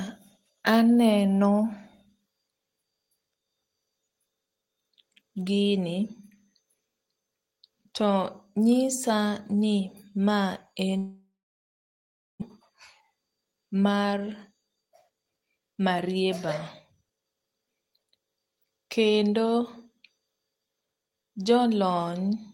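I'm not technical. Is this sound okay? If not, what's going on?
No. From 10.97 to 12.44 s the speech stops: the last sound trails off as a fading buzz, then nearly silence for about a second, and when it returns about a second of speech is simply missing. This is likely a long network dropout, where the audio stopped arriving. Unlike a quick click or stutter, it lasts long enough that part of what was said is lost.

Right after, from 12.69 to 16.47 s, the speech runs about 9% faster, sounding hurried. This is a jitter buffer speed-up: after the gap, audio piled up, so the receiver trimmed tiny slivers, roughly 0.4 s in all, to catch up. The pitch stays the same, so the voice doesn't turn squeaky as it would if a recording were just played faster.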